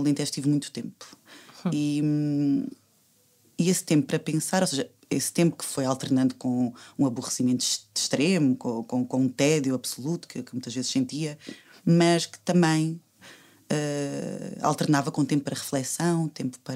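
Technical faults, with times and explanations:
Nothing stood out on listening to this recording.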